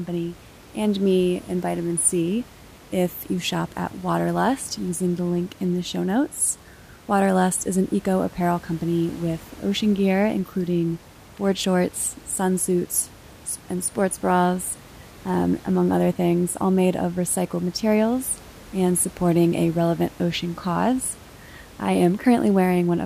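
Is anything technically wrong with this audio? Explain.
No, nothing is technically wrong.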